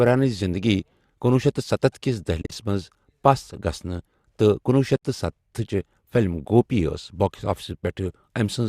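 At 2.42 to 2.52 s, AAC frame loss with muting leaves the speech broken by brief silences. About 80 ms of sound goes missing across 100 ms, with the longest gap a few tens of milliseconds. At 4.96 to 5.03 s, another 70 ms of sound goes missing. The decoder zeroes the missing frames, and the overlapping windows fade the sound out and back in, so the holes have soft edges. That separates them from hard-edged dropouts. The short gaps point to the likely low-delay AAC stream.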